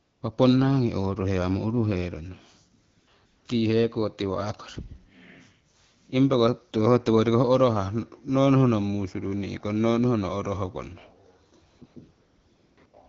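AMR comfort noise replaces the speech pauses at 0.01–0.21, 2.85–3.07 and 3.25–3.45 s (both just before "tii heko"), then 11.69–11.81, 11.85–11.95, 12.11–12.77 and 12.85–12.93 s. The phone stopped sending speech frames, and smooth synthetic noise stands in for the real background. The lightly coded wideband speech around it points to an HD Voice link at roughly 12.65 kbit/s.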